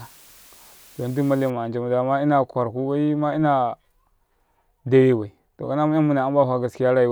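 Low bit depth with dither runs from 0.0 to 1.5 s, ending just before "anca muda ma ina". The speech is held to 7 bits with dither added before rounding, so the rounding error becomes a steady, even hiss roughly 30 dB below the signal, without distortion.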